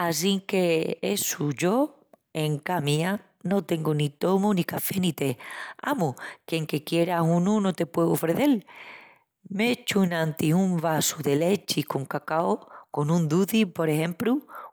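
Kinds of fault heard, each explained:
Kinds of fault heard: none in this speech recording.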